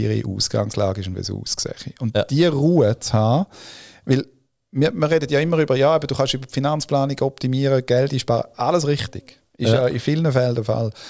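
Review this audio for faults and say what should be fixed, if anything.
Nothing should be fixed, as reviewing this audio turned up no faults.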